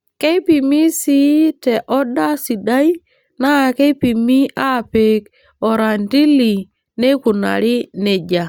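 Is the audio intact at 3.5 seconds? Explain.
No. Just before 3.5 seconds, from about 3.45 to 3.48 s, the speech is interrupted by a corrupt frame decoded. Bits inside the compressed data were flipped, and the decoder played the damaged frames anyway. About two frames are affected. Their gains and codes were misread, so energy lands at the wrong frequencies. The result is a brief chirp, squeak, blip or burst of noise peaking at around -10 dBFS.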